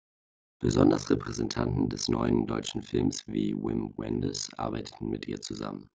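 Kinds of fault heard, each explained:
Overlap-add ripple: A harsh, buzzy robotic tremolo runs through the whole speech clip. The level plunges by about 60 dB around 50 times a second, because the windowed frames were overlapped and summed with a gain that never evens out to a constant.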